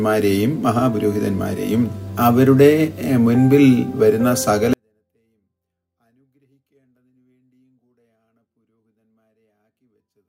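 At 4.73 s the level collapses by about 48 dB and stays there to the end at 10.29 s: a 24-bit alignment error that leaves the audio too quiet. Samples stored in the lower three bytes of each 32-bit word are being read as full 32-bit values, so every amplitude is shrunk by a factor of 256. The sound stays clean but nearly vanishes. The waveform shrinks to a flat line, and the spectrogram keeps its shape but fades almost to black.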